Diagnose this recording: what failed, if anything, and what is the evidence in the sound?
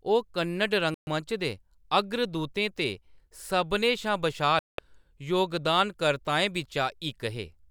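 Digital broadcast dropout at 0.94 to 1.08 s and 4.59 to 4.79 s, in the reception and decoding stage: the speech mutes abruptly, then resumes further on with the intervening audio missing. The 128 ms and 192 ms holes fit whole frames of about 32 ms failing and being muted.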